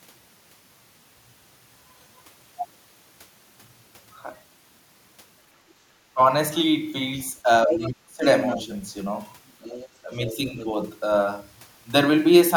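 At 5.62 to 5.78 s the room tone behind the speech sinks by about 13 dB for roughly a sixth of a second and then returns. This is background gated by the echo canceller: while the far end was playing through the loudspeaker, the canceller clamped the microphone gain, pulling the ambient sound down with it until it released.

A brief dip follows at 6.14 to 6.19 s, where the talker's speech drops by roughly 15 dB for a moment. A longer, deeper stretch runs from 7.43 to 8.25 s, with the speech ducking by around 20 dB in pieces adding up to about half a second. These are speech suppressed in double talk, likely because both sides spoke together and the canceller, unable to tell the local talker from the loudspeaker echo, attenuated everything.

During that stretch, at 7.7 to 7.89 s, a second voice intrudes only about 5 dB below the talker. Another scrap at 8.37 to 8.6 s sits roughly 10 dB down. 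A faint, longer trace from 9.48 to 10.73 s is around 20 dB under the speech. This is the other side's voice leaking through, likely residual loudspeaker echo the canceller failed to subtract.

Inside that last leak, from 10.03 to 10.57 s, the speech is again pushed down by about 10 dB over roughly a third of a second. This is another case of speech suppressed in double talk, likely from the canceller reacting to the overlapping far-end signal.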